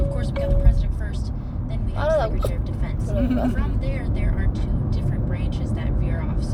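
Throughout the clip, the sender's audio clock runs faster than the receiver's, by roughly five percent. This is clock drift between sender and receiver. Because samples arrive more quickly than the receiving side plays them out, its jitter buffer keeps filling. Everyday sounds in the recording therefore pass through a link that is always slightly behind, and that backlog has to be trimmed away continually to stop it growing.

From 0.38 s to 6.46 s, the receiver makes repeated timing corrections. It discards short slices of audio at uneven intervals so it can keep pace with the faster sender. Every edit removes material, so the sound runs at about 102 percent speed across this stretch. Each cut is small. If heard at all, they come through as faint hiccups and a tempo that feels slightly rushed and unsteady, not as obvious dropouts.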